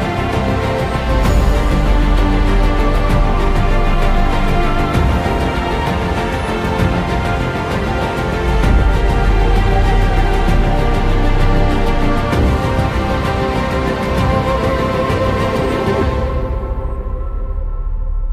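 No technical faults can be heard anywhere in this audio.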